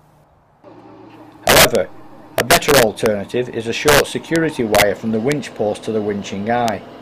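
Integer overflow cracks break out on loud peaks. The longest runs are 1.47 to 1.75 s and 2.38 to 3.06 s, where peaks push about 1 dB past the limit. Shorter bursts follow at 3.88 to 4.00 s, 4.36 s, 4.75 to 4.82 s, 5.32 s and 6.68 s, with peaks only just reaching it. Each overshoot wraps to the opposite sign instead of being limited. The waveform jumps across its full range. Each one is a violent crack, far sharper than clipping.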